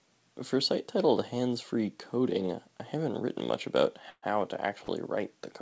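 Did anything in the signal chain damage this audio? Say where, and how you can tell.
Yes. A call audio freeze at 4.10–4.25 s, after "haven't written much about": delayed network packets likely emptied the jitter buffer, so the last sound continues as a buzz or hiss, fades to brief silence, then resumes intact.

A short stall from a late packet at 4.85–4.90 s: the jitter buffer briefly ran dry, and the receiver stretched the sound by 37 ms, leaving it held too long with a slight buzz or dip.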